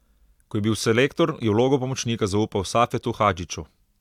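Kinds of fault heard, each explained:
Nothing here stands out as a fault; the speech just runs along with no dropouts, clicks, glitches or distortion to point to.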